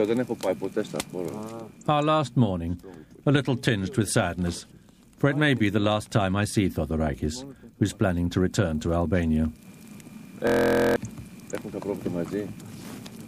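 At 10.47 s the audio locks into a system hang loop that lasts until 10.96 s. The computer or its audio driver stalled. The sound hardware kept replaying the same stretch of its ring buffer. That stretch is 23.2 ms long, which fits a 1024-sample buffer. It repeats 21 times at 43.1 Hz. Such a short loop is heard as a steady buzz, not a stutter. About half a second of audio is lost.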